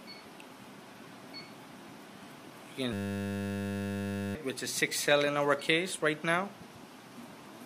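From 2.93 to 4.35 s a system hang loop replaces the sound: the system froze while the hardware kept replaying one 10 ms buffer, producing a steady 100 Hz buzz. Unlike a dropout, nothing goes silent, yet about 1.5 s of audio never arrives.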